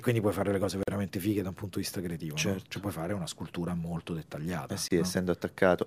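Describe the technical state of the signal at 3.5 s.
At 3.5 s the signal is intact, with no audible fault at that moment.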